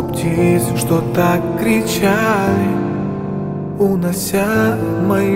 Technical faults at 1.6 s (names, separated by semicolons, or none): none